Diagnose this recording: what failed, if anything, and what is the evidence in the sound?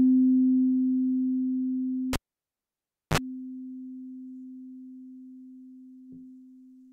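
The failure is in the analogue wiring: a cable pulled and plugged in. A pop at 2.13 s starts about 1.0 s of near silence. A 41 ms burst of 50 Hz mains buzz comes as the tip touches first. Another pop at 3.18 s restores the sound.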